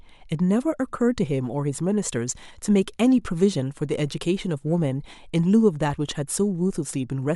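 Nothing technical goes wrong anywhere in this speech recording, so there's nothing to flag here.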